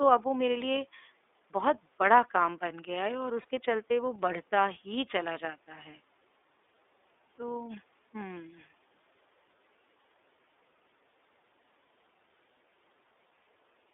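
Throughout, the speech carries the iLBC codec: the band is held to roughly 300 Hz to 3.6 kHz, and the plainly audible coding gives a rough, slightly synthetic edge. Each 30 ms block is coded independently, which fits iLBC's 13.33 kbps mode.

At 3.42 to 3.45 s a lost iLBC frame leaves a 30 ms gap. The decoder fills it by repeating the last pitch cycle mixed with noise, heard as a brief held, faintly buzzy vowel, and the speech recovers immediately afterwards.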